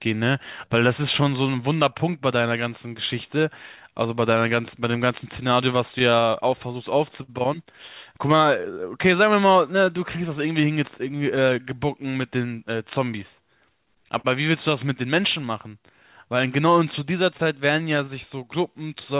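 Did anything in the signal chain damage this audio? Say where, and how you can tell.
Yes. The damage is in the network and jitter-buffer stage, with clock drift between sender and receiver running through the whole clip. The sender's clock runs around 5 percent slow, so the receiver's buffer keeps draining and has to be topped up with stretched audio.

You can hear the resulting repeated timing corrections from 0.01 s to 19.16 s. The receiver keeps repeating small slices to stay in step, so the speech plays at about 96% speed and picks up roughly 0.7 s overall. It comes across as an uneven, slightly dragging tempo.

There are scattered short gaps, lost or late packets patched by continuing the last sound. Around five sit between 3.28 and 7.3 s, the longest around 50 ms. About four more fall between 9.98 and 12.25 s, and another four between 16.04 and 17.41 s. Those last two groups are very brief. 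They come across as small ticks and smears.

At 14.18 to 14.26 s there's a short stall from a late packet. The buffer ran dry, and the receiver held the last sound for 61 ms until the packet arrived. Nothing's missing, but that moment hangs a touch too long, over a G.711 call path with nothing above 4 kHz.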